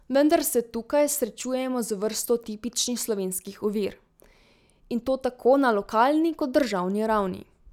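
No technical faults can be heard in this recording.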